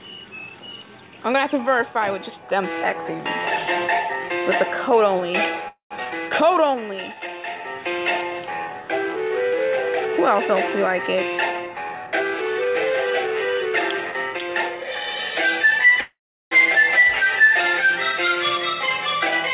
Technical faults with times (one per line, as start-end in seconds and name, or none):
5.68-5.92 call audio freeze
6.04-6.07 skip ahead
6.44-7.33 jitter buffer slow-down
11.15-14.85 jitter buffer speed-up
16.01-16.53 call audio freeze